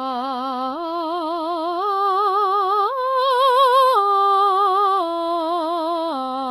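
Music, with HE-AAC compression damage plainly audible from start to finish. The treble is likely rebuilt by spectral band replication, copied upward from lower bands rather than coded directly, so it lacks true harmonic detail. Nothing remains above about 14.9 kHz, and the damage fits a very low bitrate near 20 kbps.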